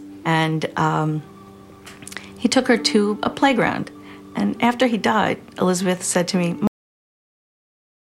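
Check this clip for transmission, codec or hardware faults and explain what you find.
There is one fault: a cut-off end. At 6.67 s the audio stops in the middle of a sound. The final stretch of audio was never written out or played, so the signal ends abruptly. There is no natural decay or fade. The level drops straight to digital silence, which holds for about 1.3 s until the clip finishes at 8.01 s. The sudden stop sounds like a hard truncation rather than a deliberate ending.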